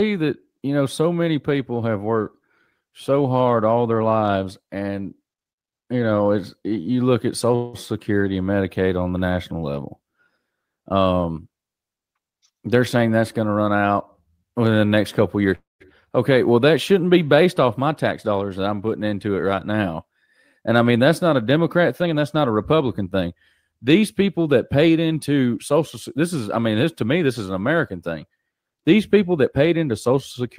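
At 7.55 to 7.76 s there is a call audio freeze. The last sound is stretched into a 182 ms buzz before the speech resumes where it left off. Nothing is lost, but the stream now runs 182 ms later, likely because delayed packets let the jitter buffer run dry.

From 12.14 to 13.57 s a jitter buffer speed-up plays the speech at 112 percent with unchanged pitch, making it sound hurried. Short pitch-period slices totalling about a fifth of a second are cut out in quick succession to work off the surplus audio that built up in the buffer.

A second call audio freeze runs from 15.55 to 15.82 s. It fills 253 ms, and the held sound fades so that 170 ms of it is silence. The speech then continues intact but later.

Two more speed-ups follow. The first, from 17.83 to 18.39 s, is milder at 108 percent and removes only a few tens of milliseconds. The second, from 22.02 to 23.73 s, runs at 111 percent and again trims about a fifth of a second, giving the same rushed delivery at normal pitch.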